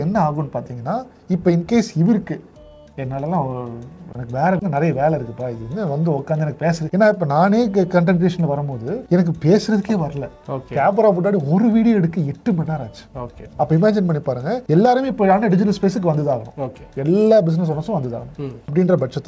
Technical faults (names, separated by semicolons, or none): none